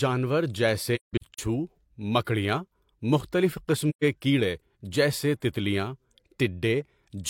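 A speech clip with AAC frame loss with muting in two places. Between 0.95 and 1.39 s, about a quarter second of sound disappears in scattered gaps, the longest around 150 ms. A single hole of about 128 ms follows at 3.89 to 4.04 s. Each gap fades out and back in rather than cutting off, because the decoder zeroes the missing frames and the overlapping windows smooth the edges. That softness sets it apart from a hard dropout.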